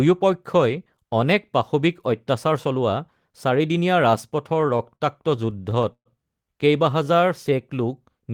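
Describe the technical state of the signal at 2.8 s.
At 2.8 s the speech signal is intact, with no audible technical fault at that point.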